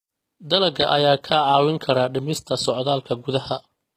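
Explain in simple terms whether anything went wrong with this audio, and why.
Likely HE-AAC compression, throughout the clip: the s sounds in the speech come out gritty and lispy, and the treble sounds bright but artificial. This codec saves data by copying lower sounds upward to fake the treble, so the top never quite matches.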